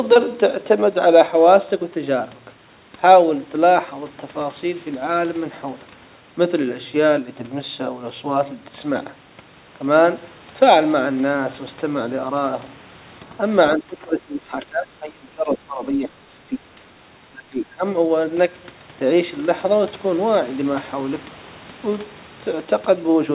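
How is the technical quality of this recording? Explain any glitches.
The recording has two stretches of speech suppressed in double talk. It travels over a narrowband call path with nothing above 4 kHz, which fits G.711 A-law coding.

From 13.74 to 16.74 s and from 17.30 to 17.84 s, speech drops roughly 20 dB, likely from an echo canceller ducking overlapping talk. The waveform shrinks and the spectrogram fades.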